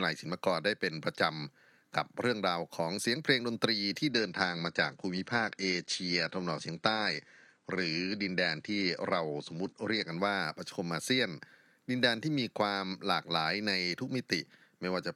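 From 4.11 s to 10.11 s the speech drops to an adaptive stream at a lower bitrate: the treble vanishes above 10 kHz and codec smearing sets in, which fits a step from roughly 96 down to 32 kbit/s. It switches abruptly both ways, no gap.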